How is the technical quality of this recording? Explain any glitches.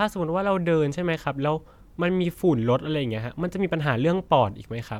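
No audible glitches or faults.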